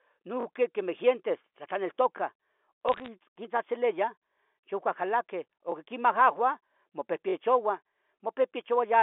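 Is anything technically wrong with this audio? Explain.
Yes, there are two faults. Repeated buffer at 0.41 to 0.45 s, 5.72 to 5.74 s and 7.30 to 7.34 s. Audio arrived late, so a 21 ms chunk replayed, twice, once, then twice. The stretch fits a 1024-sample buffer and sounds like a brief stutter with hard joins. Bit errors on a digital phone line from 2.89 to 3.08 s. A few bits in every thousand flipped on the G.711 line, corrupting single samples. The result is a burst of sharp ticks and crackle over the speech.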